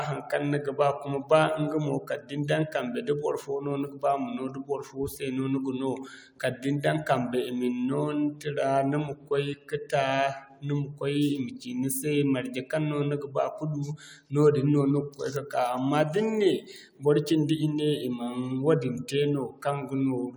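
A speech recording with no technical faults to point to. Nothing in it calls for a time or a cause.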